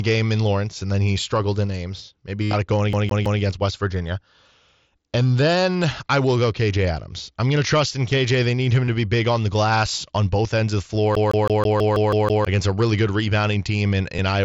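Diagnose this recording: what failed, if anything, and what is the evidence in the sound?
Concealed Bluetooth headset packet loss on the radio link between headset and phone, which otherwise carried the mSBC audio. At 2.43–2.53 s, the longest run lasts about 83 ms and becomes a buzzy held tone. Brief gaps come at 8.84–8.88 s and 14.17 s. The receiver filled each gap by repeating the best-matching recent stretch of waveform. On a spectrogram this shows as evenly spaced harmonic stripes at full level, then a smear where real audio returns.

A CD stuck on one turn at the playback stage: a scratch threw the laser back to the same spot each revolution. At 2.93–3.42 s, a 162 ms slice plays 3 times, and at 11.15–12.45 s it repeats 8 times. Each jump has a short mute. The waveform shows identical repeating blocks separated by thin dropouts.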